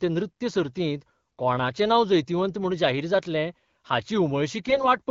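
Near the end of this speech clip, from 4.68 to 4.86 s, AMR bit errors roughen the audio. The frames fit AMR wideband at 12.65 kbit/s, which is clear elsewhere. About 5 percent of the less protected bits in that stretch arrive flipped, while the check on the core bits still passes. Excitation pulses land in wrong positions and fine pitch, gain and spectral values drift, so pitch and level hold roughly steady but the sound turns hoarse, scratchy and gargly.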